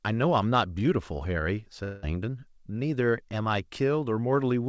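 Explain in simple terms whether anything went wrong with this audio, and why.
Something did go wrong, from about 1.84 to 2.04 s, most likely a long network dropout. For about a fifth of a second no new sound arrived, so the receiver stretched the last bit it had into a fading buzz instead of going quiet. When the speech returns, the missing part is simply gone. A brief packet-loss click would last only a few hundredths of a second, and a deliberate mute would be clean silence. The call's sound also tops out around 8 kHz, normal for this kind of call.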